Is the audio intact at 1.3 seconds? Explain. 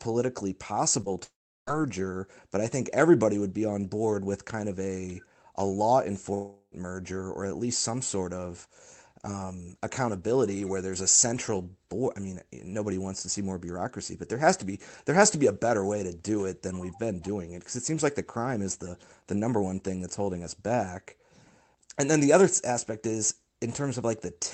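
No. From 1.24 to 1.72 s there is a long network dropout, likely caused by packets ceasing to arrive on the call path. With nothing to play, the receiver stretches the last sound into a buzzy tail that fades, leaving about 370 ms of near-silence. When audio returns at 1.72 s, some 440 ms of the original is simply gone, so the sound jumps ahead instead of resuming where it stopped.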